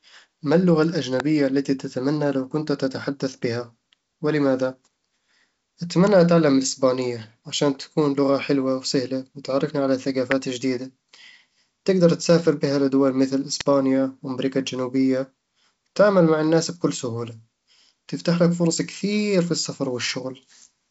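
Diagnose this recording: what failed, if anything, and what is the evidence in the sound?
Sharp snaps cut across the speech at 1.20 s after "ما اللغة", 10.31 s after "حلوة وسهلة وتعرفني على" and 13.61 s after "تسافر بها لدول مثل". These are electrical switching spikes, likely a nearby switch or arc coupling into the analogue wiring.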